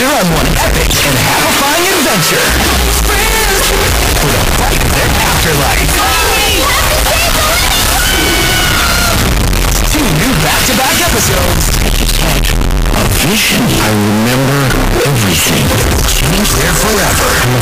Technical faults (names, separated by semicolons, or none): float read as integer